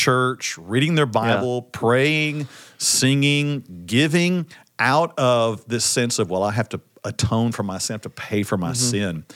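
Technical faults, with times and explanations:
Nothing technically faulty can be heard in this speech.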